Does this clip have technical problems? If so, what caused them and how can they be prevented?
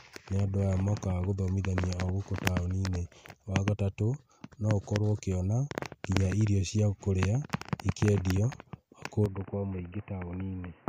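Yes. From 9.26 s to the end at 10.89 s the speech abruptly turns dull and boxy, with nothing above 3 kHz, a level about 5 dB lower and a faint new noise floor well below it. No gap marks the change. The likely cause is an input switched to a poorer device, such as a headset dropping into its narrowband call profile. Locking the recording input to one fixed device, with automatic switching disabled, prevents this.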